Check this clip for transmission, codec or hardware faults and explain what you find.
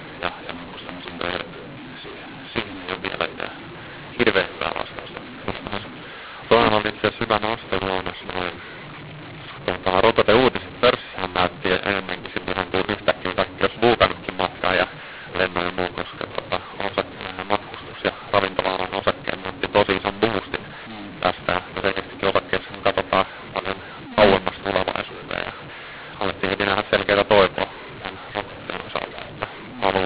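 One fault runs through the whole recording: a mismatch between the two G.711 companding laws.

mu-law and A-law mixed up, throughout: the audio was coded with A-law, at 8,000 samples a second with its 4 kHz ceiling, but decoded as mu-law. Each 8-bit code lands at the wrong level, scrambling loud and soft samples and lifting near-silent ones. The speech sounds harsh and distorted, and the pauses fill with noise.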